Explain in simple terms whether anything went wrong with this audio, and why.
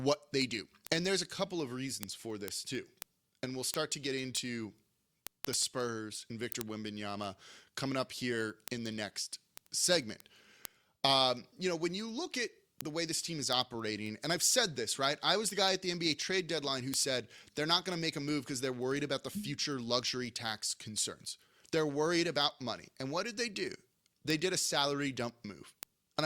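Yes, something went wrong. The recording device wasn't synchronised to the clock of the equipment sending it the audio, so the two ran at slightly different speeds, off by roughly a couple of hundred parts per million. Each time they slipped out of step, one sample was lost or doubled. You hear this as word clock ticks, a steady stream of sharp clicks of uneven strength, about ten per second, from 0.15 s to 26.19 s, around three hundred in all.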